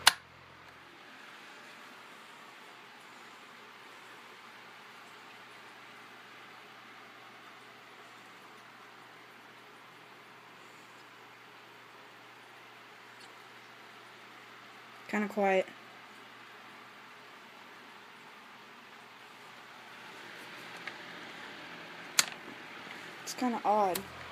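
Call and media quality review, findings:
Corrupt frame decoded at 5.30–5.32 s, 7.47–7.49 s and 13.19–13.27 s. Brief bursts of misplaced spectral energy, each a couple of frames long (about three at 13.2 s), error sitting roughly 40 dB down. Decoder played bit-damaged frames, so gains and codes landed wrong.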